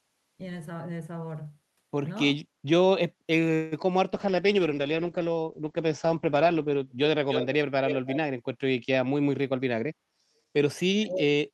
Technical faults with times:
3.55-3.74 call audio freeze
4.15-6.93 call bitrate drop
7.28-7.46 echo leak
7.87-8.16 echo leak
8.90-10.27 jitter buffer speed-up
10.95-11.47 speech suppressed in double talk

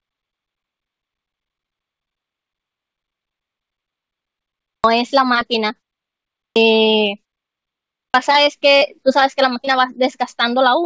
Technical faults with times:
4.57-4.84 clipped start after a pause
6.29-6.56 clipped start after a pause
7.88-8.14 clipped start after a pause
8.33-9.75 repeated packet loss (robotic sound)

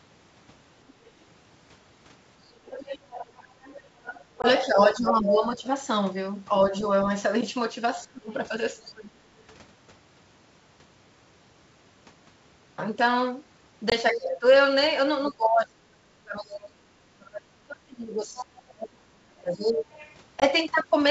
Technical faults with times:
0.88-1.11 other side's voice leaking through
2.65-5.57 other side's voice leaking through
3.68-9.24 speech suppressed in double talk
4.42-4.46 packet loss on an ADPCM call
8.31-9.54 other side's voice leaking through
13.90-13.93 packet loss on an ADPCM call
14.12-14.18 other side's voice leaking through
14.12-19.87 speech suppressed in double talk
18.37-20.15 other side's voice leaking through
20.40-20.45 packet loss on an ADPCM call

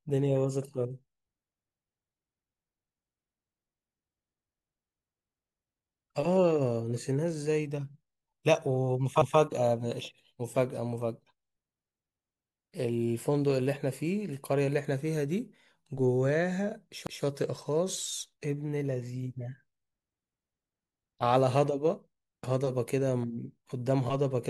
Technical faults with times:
9.22-9.39 repeated buffer
17.07-17.24 repeated buffer

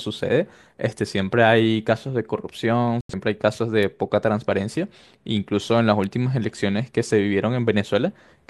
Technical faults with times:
1.58 bit error spike
3.01-3.14 digital broadcast dropout
3.83 bit error spike
6.04 bit error spike

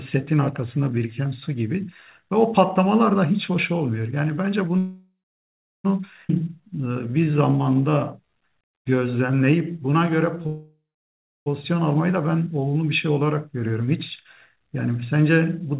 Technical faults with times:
4.78-5.86 call audio freeze
6.28-6.31 skip ahead
6.38-10.43 jitter buffer slow-down
10.47-11.48 call audio freeze
14.56-14.90 jitter buffer speed-up

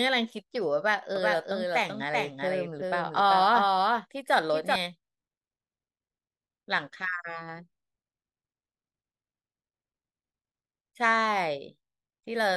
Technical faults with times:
1.16-4.76 doubled audio track

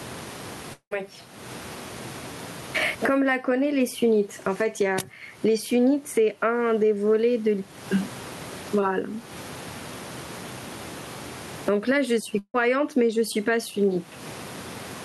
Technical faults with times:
0.00-15.04 gain pumping
0.73-0.93 long network dropout
12.39-12.56 burst of packet loss

